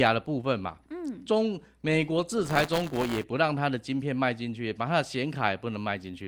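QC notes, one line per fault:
2.44–3.24 s, buffer tearing: the program filling the playback ring buffer and the hardware draining it slipped out of step, so their positions crossed inside every period. A small slice of each buffer, around 7 percent, replayed audio from one lap earlier, roughly 10 ms stale, with hard joins on either side. Those repeating splices produce a rattling 172 Hz buzz over the speech, a rate that fits a 256-sample buffer.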